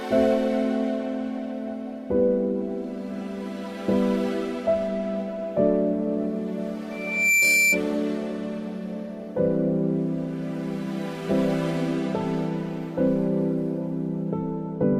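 From 6.91 to 7.83 s, loudspeaker feedback squeal at 2.4 kHz. Microphone-to-speaker loop gain exceeds unity, so a single tone swells over roughly 0.4 s to about 5 dB above the sound. It shows as a bright horizontal line on the spectrogram.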